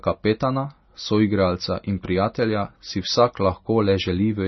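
Throughout, the speech has nothing above 5.9 kHz and a watery, swirling texture on s sounds, likely from heavy MP3 compression at a bitrate around 24 kbps. A simple low-pass filter would dull the sound without that shifting, chirpy grain.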